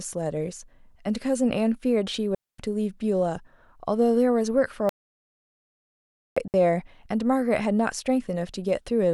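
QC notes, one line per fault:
2.35–2.59 s: digital wireless dropout. The receiver mutes for about 240 ms with a quick fade, leaving a clean near-silent hole with no noise burst on either side.
4.89–6.37 s: audio dropout to silence. The speech cuts out for about 1.47 s to silence with no room tone, likely a lost input while the recorder kept writing silence.
6.48–6.54 s: digital wireless dropout. A second, shorter mute of about 62 ms, again a clean gap with a short fade and no surrounding noise.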